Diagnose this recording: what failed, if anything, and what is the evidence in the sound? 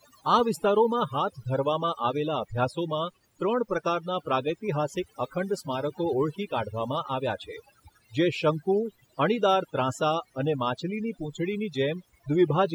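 Overdone noise removal runs through the whole of this speech clip. The noise reducer was set too aggressively, so any frequency band sitting near its noise estimate is pulled far down or muted. The background drops and breaks up into twinkling specks, and quiet parts of the speech go too. A spectrogram shows scattered isolated bright dots in the gaps and ragged, hollowed-out harmonics during speech.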